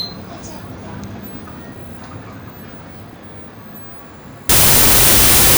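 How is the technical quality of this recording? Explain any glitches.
The recording has one clear glitch near the end. From 4.49 s to the end at about 5.58 s there is a wrong sample width fault. The bytes are being read in the wrong size, consistent with 32-bit float data read as 16-bit integers. Each original sample is split into mismatched pieces, so loud broadband noise buries the sound, which also plays at half speed and an octave lower. A spectrogram would show a sudden full-band noise wash. The waveform would jump to large, jagged values.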